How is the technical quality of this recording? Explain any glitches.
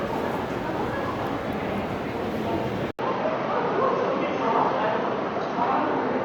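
The quality drops partway through. At 2.91 s the sound breaks for about 80 ms, then returns through what is most likely an input switched to a poorer device, which holds to the end. The replacement input passes nothing above 6.4 kHz, so the sound turns duller and boxier and loses its crisp top end. The level stays about the same, but a new, faint background noise appears, sitting roughly 50 dB below the sound.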